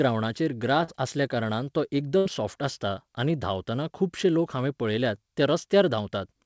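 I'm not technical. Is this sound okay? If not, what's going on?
No, there are two brief dropouts, typical of an internet call.

At about 0.84 to 0.90 s, just before "आसल्या कारणान तो", there's a short concealed packet loss. About 40 ms of speech never arrived in time, so the receiving end briefly extended the sound it already had and then blended back into the real speech. You hear a quick smear or wobble. What sets it apart from the later fault is that it's much shorter.

At about 2.18 to 2.27 s, between "आसल्या कारणान तो" and "सॉफ्ट आसता आनी धांवताना", there's a burst of packet loss. Roughly 80 ms went missing in a row, twice as long as the first gap. The receiver stretched the last sound and faded it out, so you hear a short held buzz or fading hiss. Then the speech picks up further along, with a small piece skipped. That longer skip is the difference from the first, briefer glitch.

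The call connection adds a dull quality, with nothing above about 8 kHz.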